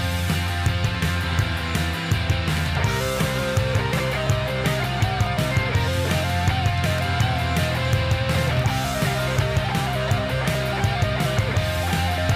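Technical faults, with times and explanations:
0.95, 2.22, 4.27, 5.26, 6.06, 10.55 s: single sharp clicks, likely dropped samples, each losing under a millisecond, so the waveform jumps abruptly between values.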